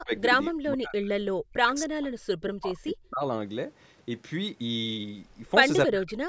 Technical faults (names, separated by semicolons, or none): speech suppressed in double talk